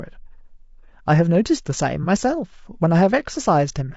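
Throughout, the speech sounds rough and grainy, with noise between harmonics, likely from low-delay AAC compression at a low bitrate around 32 kbps, whose short frames resolve pitch poorly. From 2.03 to 2.07 s, AAC frame loss with concealment leaves a brief smeared, noisy patch as the decoder fills about 30 ms from the previous spectrum.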